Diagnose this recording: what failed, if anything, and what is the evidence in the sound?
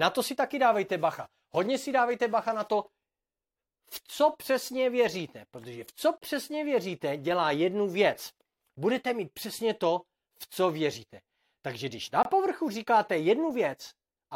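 The failure is at the playback stage: a gap between stream segments, where the timestamps of consecutive segments don't quite meet and the player pads the shortfall with silence. The sound drops out cleanly, with hard edges, at 6.18–6.22 s (about 37 ms) and again at 12.23–12.25 s (about 22 ms). The two holes fall roughly 6 s apart, which points to 6-second segments. Nothing is lost; the speech simply pauses and resumes intact.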